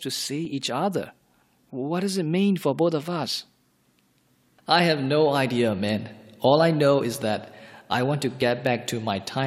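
At 0.45 s and 8.42 s, overlap between stream segments trims a few milliseconds at a boundary of what sound like 4-second segments, leaving a tiny skip rather than a dropout's audible gap.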